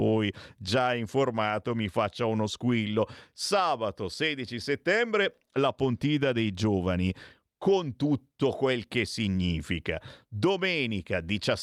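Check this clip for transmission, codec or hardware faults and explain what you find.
No faults turned up when I checked this clip.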